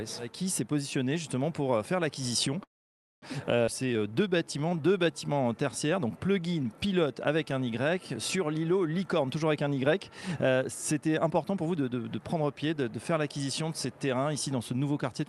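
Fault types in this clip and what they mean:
call audio freeze: From 2.63 to 3.24 s the sound stops and holds for about 0.59 s, almost all of it (0.55 s) silent, then resumes exactly where it left off with nothing lost. The likely cause is delayed packets draining the jitter buffer. On a waveform this shows as a flat gap after a short tail. On a spectrogram it is a blank vertical band, with the content on either side lining up naturally.
skip ahead: At 3.66 s playback jumps forward, dropping roughly 150 ms of audio behind a fill of only 12 ms, so the two sides are butted almost directly together. On a waveform the envelope changes abruptly at the splice point. On a spectrogram a vertical seam appears where harmonics and formant tracks break and restart in different positions without any transition between them.
jitter buffer slow-down: Between 3.82 and 5.14 s the audio runs at 88% speed. 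The receiver repeated single pitch periods to add 160 ms and rebuild its reserve, so sounds are drawn out while the pitch stays the same. On a spectrogram the harmonic lines stretch horizontally but keep their spacing. On a waveform near-identical cycles repeat in runs.
jitter buffer speed-up: The buffer held more audio than it targets, so short pitch-period pieces were cut out. From 9.19 to 9.67 s the audio plays at 110% speed with about 50 ms removed, and from 11.02 to 12.53 s at 111% with about 200 ms removed. It sounds hurried but the pitch is unchanged. On a spectrogram events are compressed in time, harmonics keep their spacing, and small cycle-level discontinuities mark each excision.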